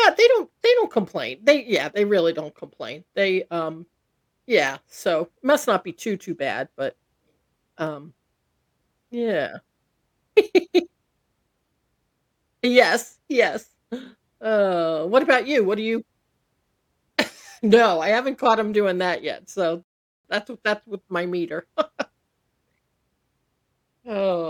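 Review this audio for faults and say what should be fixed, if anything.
Two sharp, isolated clicks in the speech, at 4.68 s and 7.87 s, each a single tick with no gap or dropout around it. Their likely cause is dropped samples: a fraction of a millisecond of the stream went missing, so the waveform leaps straight from one value to a later one. That discontinuity is too brief to remove any audible sound, but the abrupt step produces a click. Prevention: make sure the capture or processing chain never skips samples under load, for example by giving the audio thread priority and sizing buffers generously.

The speech cuts to silence at 19.83 s and picks up again at 20.25 s, resuming exactly where it stopped, just before "that's w that's with". This is a rebuffering stall. The player used up its downloaded audio and paused until more arrived, so nothing is missing, but about 0.42 s of dead air is inserted. 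Prevention: have the player keep a larger buffer ahead of playback, or lower the streaming bitrate so delivery stays ahead of playback.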